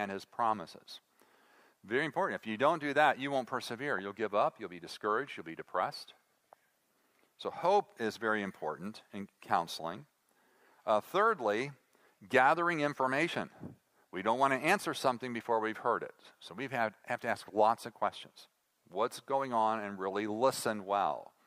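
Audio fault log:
Nothing stood out on listening to the whole recording.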